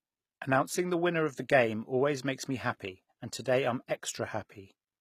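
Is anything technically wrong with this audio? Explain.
Yes. Throughout the speech, the sibilants sound gritty and plainly lispy, and the treble has a bright but synthetic, metallic sheen that doesn't blend with the lower voice. That points to HE-AAC compression, likely at a low rate near 20 kbps. The codec carries only the lower spectrum faithfully and rebuilds the top by copying lower bands upward under a coarse envelope, so the regenerated harmonics miss the real ones. The content stops near 20.5 kHz.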